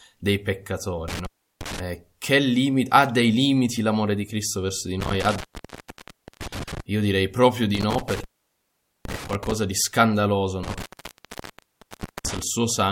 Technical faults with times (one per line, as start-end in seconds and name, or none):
1.08-1.79 intermittent contact
5.00-6.80 intermittent contact
7.75-9.55 intermittent contact
10.63-12.42 intermittent contact